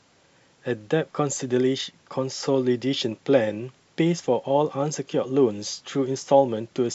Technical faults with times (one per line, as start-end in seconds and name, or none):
none